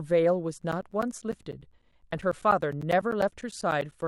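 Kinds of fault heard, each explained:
Periodic USB or driver dropouts: from 0.62 to 4.02 s, something stalls the USB bus or audio driver every 0.1 s, and each time around 10 ms of the speech drops to silence, giving about forty evenly spaced ticks heard across the signal.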